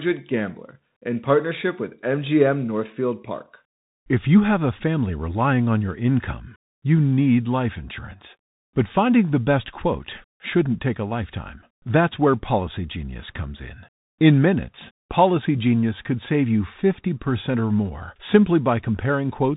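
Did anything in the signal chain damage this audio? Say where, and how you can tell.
Yes, at the codec stage: Bluetooth CVSD headset codec throughout. Nothing above 3.8 kHz, scratchy sibilants and granular hiss come from one-bit adaptive-step encoding, fitting 64 kbit/s.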